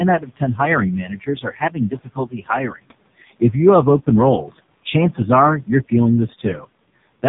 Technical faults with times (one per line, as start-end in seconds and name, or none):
0.00-7.29 noise suppressor artifacts
0.00-7.29 AMR narrowband mobile codec
0.19-0.60 speech cut by the noise suppressor